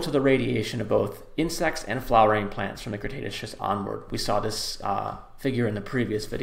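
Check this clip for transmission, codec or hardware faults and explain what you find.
Nothing stood out on listening to this clip.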